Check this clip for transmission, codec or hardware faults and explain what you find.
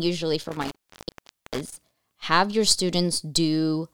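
One hardware fault is audible, an intermittent contact. Between 0.43 and 1.80 s, just before "have your", the speech crackles and drops out for 0.84 s as a loose connection briefly opens the signal path.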